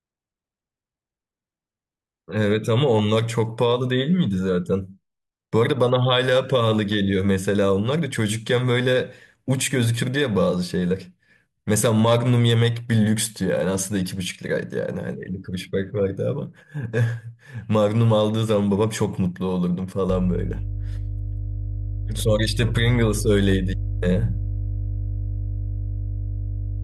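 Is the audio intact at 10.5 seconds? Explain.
Yes, the speech at 10.5 s is intact, with no fault heard at that moment.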